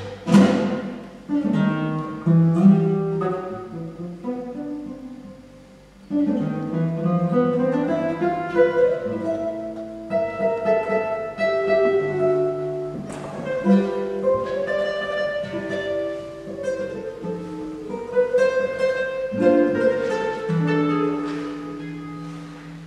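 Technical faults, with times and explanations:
No technical faults can be heard anywhere in the clip.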